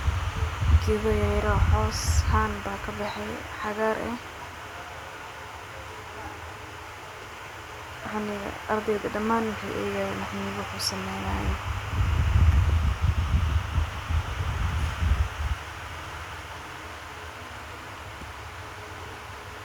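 No technical fault can be heard anywhere in this speech recording. Nothing in the audio points to a problem in how it was captured, carried or played back.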